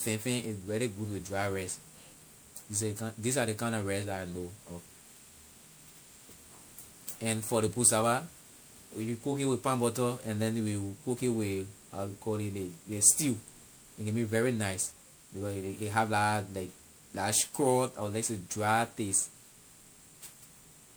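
Speech throughout shows generation loss: a swirly, hollow, smeared texture with blurred consonant attacks, likely from around five successive MP3 re-encodes at a rate consistent with 128 kbit/s. A spectrogram shows flickering spectral holes and a ceiling near 20.9 kHz.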